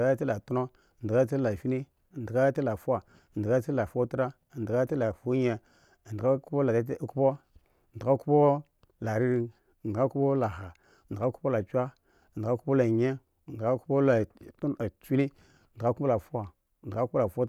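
From 10.44 s to 11.63 s the speech carries a short run of CD scratch ticks: seven tiny clicks, evenly spaced at roughly five per second, the longest lasting about 1.5 ms. A blemish on the disc passes the laser once per revolution, and each pass destroys more data than error correction can rebuild, so the player papers over the gap. The strict rhythm separates this from random vinyl crackle or scattered digital clicks.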